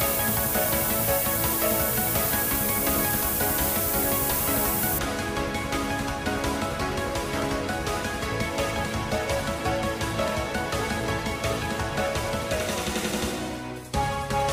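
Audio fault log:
0.0–4.99 s, low bit depth with noise shaping: the audio is reduced to just 3 bits, and the rounding error is pushed toward high frequencies. The result is a steady, thin hiss that grows stronger toward the top of the band and sits about 5 dB louder than the sound itself. On a spectrogram, a dense noise floor tilts upward and brightens toward the highest frequencies. On the waveform, coarse stair-step levels are buried in fuzz until the hiss stops abruptly at 4.99 s.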